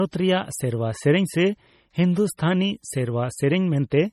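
Across the whole speech recording, nothing is present above about 15.7 kHz, and the band below that carries the smeared, watery texture typical of heavy perceptual coding. This is likely low-bitrate audio saved at a high bitrate: the artefacts point to an MP3 encoded at around 32 kbit/s and later re-encoded at something like 192 kbit/s. The larger second file cannot restore the detail the first encoder discarded, so the damage from the first pass remains.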